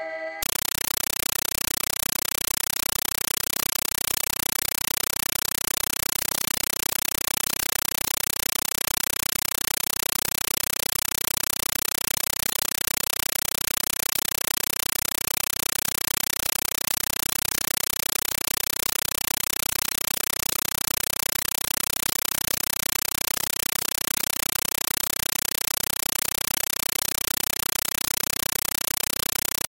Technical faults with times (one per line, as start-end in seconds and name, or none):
0.43-29.70 compressed stream played as audio